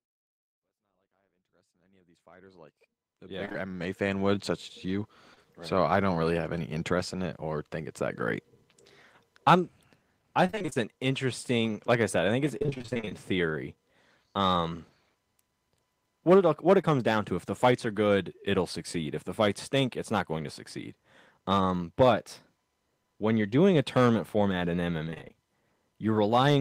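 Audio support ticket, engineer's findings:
Repeated packet loss, robotic sound: choppy bursts at 3.45–3.56 s, 10.46–10.78 s (before "an interesting like I"), 12.59–13.13 s (after "said I think it's") and 25.05–25.35 s. Packets lost or late on the network. Holes up to 25 ms, about half of each span patched by extending prior audio.

Short concealed packet loss: brief smears at 5.34 s and 16.81 s (between "what it what it" and "down to if the"). A single 20 ms hole each time, bridged by the decoder's concealment.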